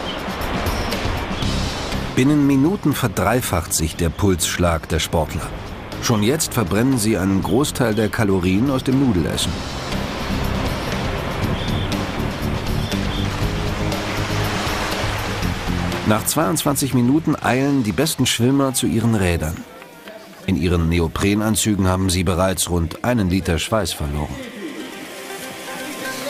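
No technical faults are audible.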